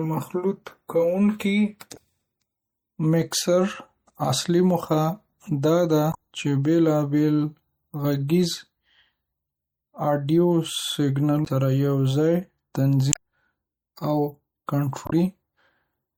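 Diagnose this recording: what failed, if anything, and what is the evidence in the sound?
Codec stage: the speech throughout has a dulled top end and watery, swirling sibilants, likely from MP3 compression at a low bitrate near 64 kbps, with high bands starved of bits.

Storage or network stage: damaged data in a compressed stream gives brief glitches at 1.93–1.97, 6.11–6.15, 11.44–11.48, 13.09–13.16 and 15.05–15.13 s, where the decoder misreads frames and resynchronises.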